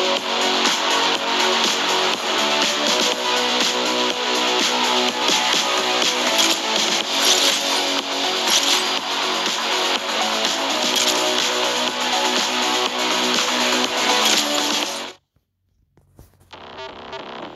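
The recording chain likely dropped audio between chunks, losing a short slice, around 50 ms, at each handover. The audio skips at 5.22, 11.18 and 17.13 s, joined without silence, and the roughly six-second spacing fits 6-second processing chunks.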